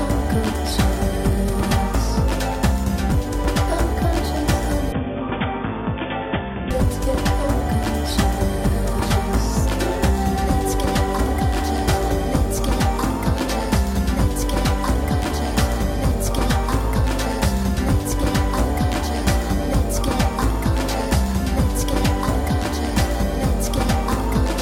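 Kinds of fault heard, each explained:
Input switched to a poorer device: the sound abruptly turns dull, with nothing above 3.6 kHz and about 5 dB quieter, likely a narrower-band input briefly taking over.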